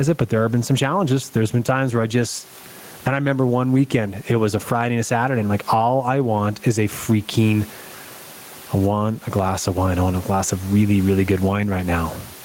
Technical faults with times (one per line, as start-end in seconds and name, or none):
0.00-12.44 gain pumping